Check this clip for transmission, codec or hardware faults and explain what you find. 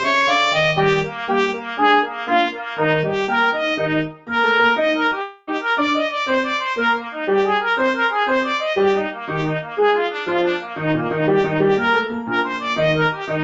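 Several faults come from the call path. A speech noise suppressor was left running on non-speech audio, there is a tiny concealed packet gap, and just after it comes a longer dropout. The content sits below 8 kHz, which fits the wideband Opus coding of the call.

Noise suppressor applied to music or sounds: this runs through the whole clip. A suppressor tuned for speech treats steady, sustained or fading material as background noise and keeps pulling it down, while sharp onsets slip past. The result is a level that keeps shifting by roughly 5 dB, so held sounds and decays seem to breathe, flutter and thin out rather than sustaining naturally.

Sound cut by the noise suppressor: the suppressor clamped down hardest at 1.54–1.73 s (about 6 dB), 2.06–2.25 s (about 5 dB), 2.52–2.8 s (about 7 dB), 4.08–4.3 s (about 11 dB), 9.14–9.29 s (about 7 dB), 9.63–9.78 s (about 7 dB) and 10.62–10.81 s (about 6 dB). 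Each lasts between 0.15 and 0.3 s. At these points it judged the material to be noise and gated it, so the sound briefly sinks or its tail is chopped off early. The 4.1 s dip is the deepest.

Short concealed packet loss: at 5.09–5.13 s, 20 ms of audio failed to reach the decoder in time. The receiver patched the hole by extending the preceding sound and then crossfaded back into the real signal. This is too short to register as a gap. It comes across as a fleeting smear or small wobble.

Long network dropout: from 5.21 to 5.49 s, roughly a quarter of a second of audio is missing, likely because the network stopped delivering packets. The decoder filled the entire stretch with concealment rather than silence, extending the last sound as a synthetic, fading buzz or hiss. When real audio resumes, whatever occurred during that quarter-second is simply gone.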